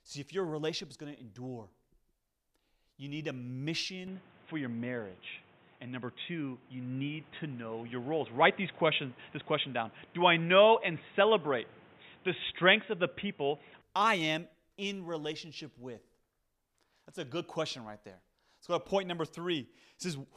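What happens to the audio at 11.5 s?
At 11.5 s the sound is dull and boxy, with nothing above 3.8 kHz, a shifted level and new background noise, from 4.07 to 13.82 s: likely an input switched to a poorer device.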